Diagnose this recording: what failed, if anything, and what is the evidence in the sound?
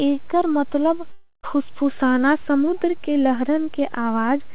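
The DC offset sits in the converter or analogue input stage and persists for the whole clip. The waveform rides on a constant shift away from zero, which cannot be heard as a tone but shows as steady energy at the very bottom of the spectrum. That fixed bias eats into headroom on one polarity, so peaks on that side reach full scale sooner, and the bias needs a high-pass filter or DC removal to correct.

The long network dropout, likely caused by packet loss on the network path, runs from 1.12 to 1.45 s in the speech. About 0.32 s of audio never arrived. The receiver's concealment carries the last sound forward as a fading buzz or hiss, leaving roughly 0.15 s of near silence at the end. Speech resumes at "फुस्फुसाना समुद्र के" with the lost portion simply absent. The band-limit at 4 kHz, consistent with G.711 mu-law, is part of the call path itself.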